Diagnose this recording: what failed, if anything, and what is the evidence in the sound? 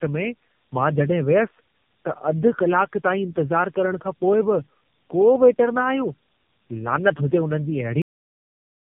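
The call was transcoded repeatedly at the codec stage, so this is tandem speech coding. The sound points to three separate low-rate narrowband speech coder passes, likely AMR-NB, joined by 64 kbit/s telephone links. Each encoder re-models audio that the previous one had already damaged, and the errors stack up. Throughout the clip the speech is rough and warbly, and nothing is present above about 3.4 kHz, which gives it a boxed-in, muffled tone.

The recording has a cut-off end, a failure at the storage or buffering stage where the final buffers were never written out. At 8.02 s the speech stops mid-sound and drops straight to digital silence, with no natural decay. That silence runs to the end of the clip. The abrupt edge shows that the audio was truncated, rather than the talker finishing and the room tailing off.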